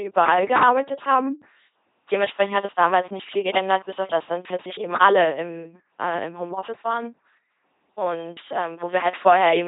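Throughout, the speech carries heavy LPC-10 vocoder damage: each moment is resynthesised as either pulse-driven buzz or noise-driven hiss through a short vocal-tract filter, giving a mechanical robot voice. Nothing remains above 3.8 kHz, consistent with a 2.4 kbit/s LPC-10 stream.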